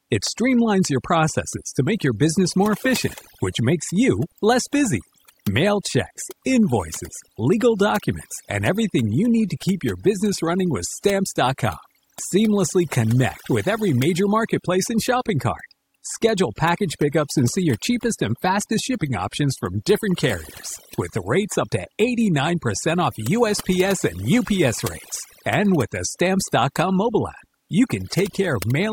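Overdone noise removal runs through the entire speech recording. The reduction was set too aggressively, pulling individual frequency bands down whenever they sat near the noise estimate. The background drops and breaks up into twinkling specks, and quieter voice components vanish.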